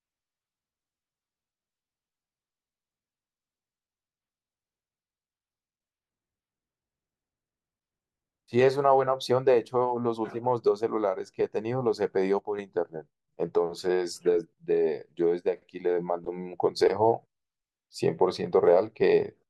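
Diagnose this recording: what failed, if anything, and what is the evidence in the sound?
A sudden gain jump at 12.39 s drops the speech by about 6 dB for roughly 0.2 s, recovering at 12.59 s. The level change is abrupt in both directions, and the background noise falls and returns together with the voice, so the change sits in the digital signal path rather than at the talker or microphone. The likely cause is a digital gain setting, or a one-bit shift equal to 6 dB, applied without a ramp in the driver or sample-format conversion stage.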